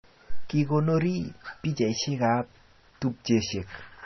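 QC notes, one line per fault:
Throughout, MP3 compression: the speech sounds dull and watery, with nothing above about 5.9 kHz, so s sounds lose their hiss and come out chirpy, and quieter detail swirls in and out. The likely cause is heavy MP3 encoding at a very low bitrate, one that fits roughly 24 kbps. Short of bits, the encoder cut the treble at a fixed frequency and zeroed weak frequency lines that flicker between frames, smearing consonant attacks.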